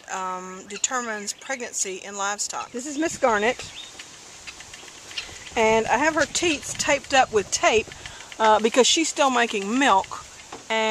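No technical faults can be heard anywhere in this audio.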